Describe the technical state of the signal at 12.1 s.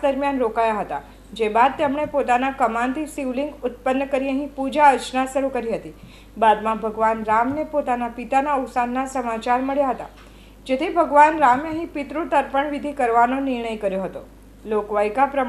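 At 12.1 s the signal is intact, with no audible technical fault at that moment.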